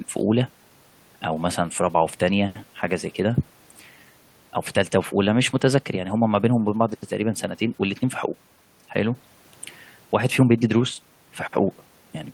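No technical faults can be heard anywhere in the speech.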